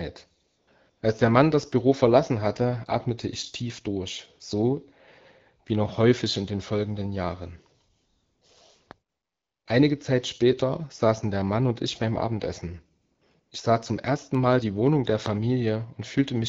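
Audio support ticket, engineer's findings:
AMR comfort noise: background swaps to a smooth, steady hiss at 0.47–0.67, 0.89–1.01, 7.95–8.41, 9.09–9.65, 13.01–13.21 and 13.39–13.51 s. The sending side's DTX judged those gaps silent and stopped sending speech frames, so the receiver synthesised filler noise from a rough level and spectrum estimate.

Loud pop: two sharp single pops, one at 8.91–8.93 s peaking about 10 dB above the signal, and a stronger one at 15.26–15.28 s, roughly 15 dB over. The audio continues underneath both. This is likely a voltage step or pulse from a connector, switch, static discharge or driver glitch getting into the chain.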